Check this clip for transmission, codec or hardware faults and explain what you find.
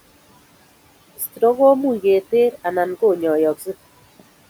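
One fault, in the processing chain rather than the transmission or codec. From 1.17 to 1.42 s, just before "ko much", the noise suppressor treated quiet speech as noise and cut it by about 14 dB, leaving roughly 150 ms swallowed and faint. The room noise, about 22 dB below the speech, belongs to the recording itself.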